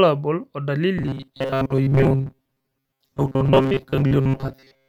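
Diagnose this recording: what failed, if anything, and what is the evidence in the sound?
Robotic sound from repeated short buffers, from 0.98 s to the end at 4.88 s: the speech becomes a rigid metallic buzz at 134 Hz. This is likely a driver or buffer underrun, with a roughly 7.5 ms block replayed while most of the real audio is skipped.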